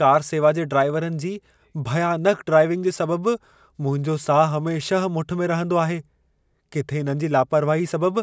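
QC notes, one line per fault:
No technical faults were detected in the speech signal.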